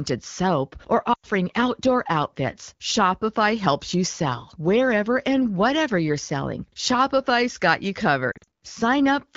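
At 1.13 to 1.26 s, lost AMR speech frames leave a 100 ms gap: the decoder repeats the last good pitch and vocal tract settings at falling gain, so the sound smears and fades rather than cutting abruptly. At 8.32 to 8.45 s the losses are scattered, runs no longer than 40 ms, giving brief warbles. Unlike a hard dropout or click, there is no silence-edge or transient. The surrounding wideband audio is clear, which fits AMR-WB at about 12.65 kbit/s.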